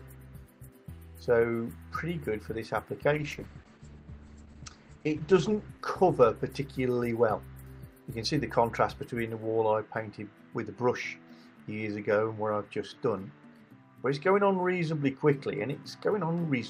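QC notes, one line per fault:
3.14–7.71 s, call bitrate drop: the sound turns rough and watery and loses its top end, with the audio band shrinking from about 20 kHz to 8 kHz. It is at its worst for about 2.25 s before clearing. The call's bandwidth estimate fell and the encoder was pushed to a far lower bitrate, which fits a fall from around 64 kbps to roughly 10 kbps. At that rate it quantises coarsely and discards the high frequencies until the rate recovers.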